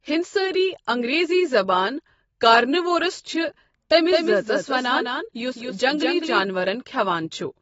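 From start to finish the speech sounds dull and smeared, with plainly audible codec damage and nothing above 7.6 kHz. This is likely AAC compression at a low bitrate, fitting AAC-LC around 24 kbps, which lowers the cut-off and quantises the spectrum coarsely.

From 4.12 s to 6.44 s a second, quieter copy of the speech trails the original by roughly a fifth of a second, at around 5 dB down, starting and stopping abruptly with no decay or room colour. This is a doubled audio track, likely from the same audio being captured again through a slower path or from an edit leaving two copies out of step.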